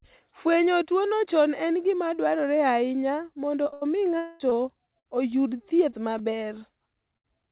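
From 3.64 s to 7.26 s, just after "gima dwarore ahinya mondo", repeated packet loss gives eight short patched holes, the longest 82 ms. It sounds choppy and robotic, and shows as smeared, repeated spectrogram frames.

From 4.18 s to 4.42 s, the sound freezes into a 220 ms buzzy continuation with no silence. This is likely a long network dropout, and it shows as a flat, stretched band under the 4 kHz ceiling of the narrowband call path.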